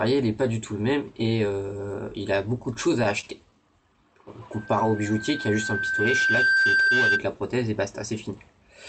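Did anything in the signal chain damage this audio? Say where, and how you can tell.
Yes. In the network and jitter-buffer stage, repeated stalls (stutter) occur from 2.73 to 3.54 s: packets arrived late, the buffer ran dry five times, and the receiver stretched the last sound across each gap, the longest 24 ms. Nothing is lost, but the audio drags and stutters.

At the playback stage, a loudspeaker feedback squeal runs from 4.52 to 7.24 s: the microphone picked up its own loudspeaker, and the loop gain exceeded one at 1.6 kHz. That single tone swells over roughly two seconds until it sits about 5 dB above the audio.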